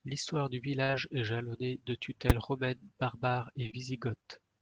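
At 0.83 s a burst of packet loss begins. About 60 ms of the speech never arrives, and the receiver stretches the last sound for roughly 52 ms while fading it out before resuming later on. The result is a held buzz or hiss that dies away, followed by a jump in the speech. It is longer and more clearly a hole than the brief smears that follow.

Immediately after, from 0.91 to 0.95 s, a short concealed packet loss fills a further 20 ms gap with about 22 ms of extrapolated sound blended back in. This comes across as a small wobble on the tail of the burst rather than an audible dropout.

At 2.30 s, invalid numbers at full scale slam the output to one extreme value for about 5 ms, which fits a 256-sample processing block. That block is too short for separate start and end pops, so it is heard as a single harsh bang. Unlike concealment, nothing is continued from the speech; the output simply sits flat at one extreme value.

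From 3.63 to 3.75 s, three short concealed packet losses in a row each replace about 20 ms. They are filled with 16, 28 and 14 ms of continued pitch or shaped noise. Together they give a rapid smeared flutter, with consonants possibly softened, but no silent gap and no fade.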